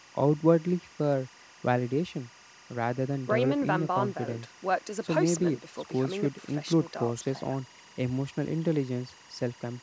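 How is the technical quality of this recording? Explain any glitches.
The recording has one persistent fault. Throughout the speech there is timecode bleed: linear timecode from an adjacent track or cable leaks in at about 25 dB below the voice, its 23.976 fps square wave flipping between roughly 1 kHz and 2 kHz. It sounds like a constant chirping warble, and a spectrogram shows steady bands near 1 kHz and 2 kHz. The call microphone processing leaves nothing above 8 kHz.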